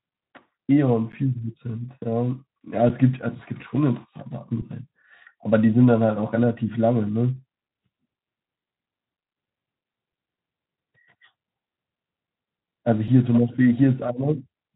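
At 1.12 s the sound freezes for about 11.6 ms. This is an underrun with held sample. The output buffer ran dry, and the converter held its last value, so the waveform goes flat instead of dropping to silence. The length fits a 512-sample buffer. Shorter holds of 5.8 ms follow at 2.89, 4.62 and 10.12 s, fitting a 256-sample buffer. A 2.8 ms hold comes at 13.08 s. Playback resumes where it stopped, so each is a brief, soft stutter rather than a click. Through the Speex codec, nothing is heard above 3.8 kHz.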